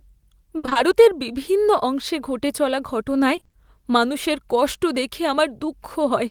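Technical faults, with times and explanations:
0.57–0.77 s, repeated packet loss (robotic sound): four gaps, up to 60 ms, patched by extending prior sound over 120 ms of the span, giving choppy speech before "বিভিন্ন অংশে ঘটে চলা".
3.35–3.55 s, repeated packet loss (robotic sound): five short gaps, up to 20 ms, concealed over half the span; repeated fill makes a robotic stutter between "বিভিন্ন অংশে ঘটে চলা" and "মানুষের কষ্ট দেখে".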